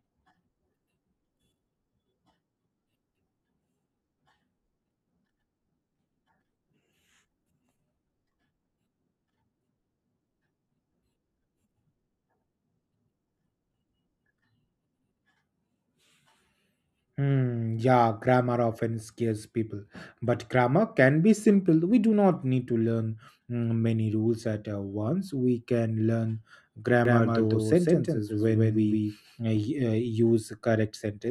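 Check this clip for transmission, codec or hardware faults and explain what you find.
One fault appears, a doubled audio track from 27.05 to 29.57 s. A second, slower capture path was likely mixed back in, laying a full-band copy of the speech about 150 ms behind, at roughly equal level, with no decay, so it sounds like a hard, stuttering echo that starts and stops abruptly.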